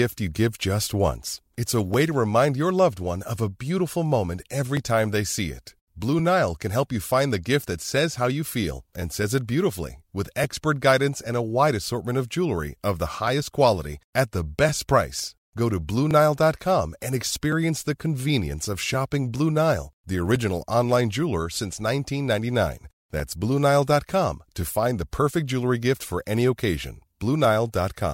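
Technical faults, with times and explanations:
0.53–27.45 s: clock drift buffer slips. About twenty brief clicks recur at a steady 1.42 s interval wherever speech is present. The likely cause is two devices running on separate clocks. Their rate mismatch, on the order of a thousand parts per million, makes the buffer between them drift until a short block of samples is dropped or repeated, which fits slips of roughly 70 samples each. Every slip breaks the waveform's continuity, so it is heard as a click at the same regular spacing.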